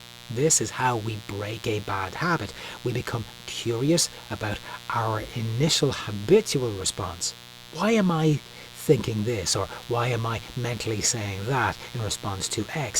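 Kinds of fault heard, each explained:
Mains buzz: A steady, raspy buzz runs under the speech for the whole clip, sitting roughly 20 dB below it. Its fundamental is 60 Hz, and its hard edge comes from sharp switching spikes, twice per mains cycle, that carry harmonics well up into the kilohertz range. That points to a dimmer, a rectifier or a missing shield coupling into the signal path.
Repeated buffer: Twice, the playback device ran short of fresh audio and replayed the previous block once more. Each repeated block is 2.67 ms long, which fits a 128-sample buffer, and there is a hard join at each end. At 6.81 s, just after "about our initial habitual", and at 9.83 s, between "I thinking this or" and "why am I mentally", the block is too short to stutter and comes through as a click or brief buzz, with a few milliseconds of audio lost.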